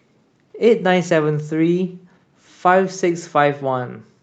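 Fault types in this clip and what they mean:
No fault types in this clip.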